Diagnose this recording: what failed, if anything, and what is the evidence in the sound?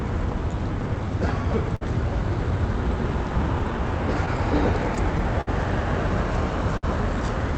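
Clock drift between sender and receiver, network and jitter-buffer stage: the sender's clock runs roughly 4% slow, so the buffer keeps draining and small timing hiccups recur unevenly throughout.

Repeated timing corrections from 0.30 to 4.38 s: the receiver keeps stretching short pieces, slowing playback to about 98% and adding about a tenth of a second overall.

Short stall from a late packet at 1.76 s and again at 6.77 s: the buffer ran empty and the last sound was held about 55 ms before resuming, with nothing lost.

Repeated stalls (stutter) from 4.72 to 5.49 s: four buffer underruns, longest 59 ms, 92 ms concealed in total, heard as dragging, stuttering sound through the Opus call path.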